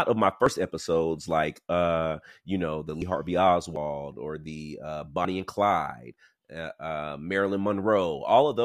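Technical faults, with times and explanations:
0.46, 3.02, 3.76 and 5.25 s: dropped buffer (overrun). Each is a jump, with the speech skipping straight ahead. Roughly 50 ms goes missing at 0.46, 3.76 and 5.25 s, and about 100 ms at 3.02 s. The likely cause is capture falling behind, so the hardware overwrote unread audio and the surviving edges were spliced together without any gap.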